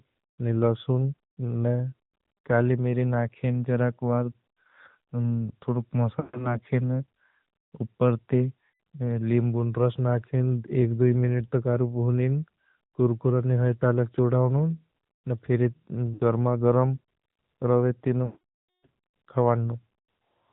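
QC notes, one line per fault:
throughout, AMR narrowband mobile codec: the speech was carried through AMR-NB, resampled to 8 kHz and rebuilt from a vocal tract model driven by a few pulses per subframe. Nothing above 4 kHz survives, so the voice sounds boxed-in and dull, and the sparse pulse coding gives it a plainly audible buzzy, synthetic edge. The degree of damage fits the 10.2 kbps mode.
6.20–6.59 s, 8.72–8.80 s, 16.14–16.22 s, 18.26–18.87 s, lost AMR speech frames: frames failed their checks, and the decoder covered each gap by repeating its last good pitch and vocal tract settings at falling gain. The shorter losses of about 140, 80 and 60 ms, the last between "न फिर" and "गरमा गरम", come out as drawn-out sound that fades away. The 580 ms run near 18.3 s drags the sound out and fades it to silence, and the voice returns weak or rough.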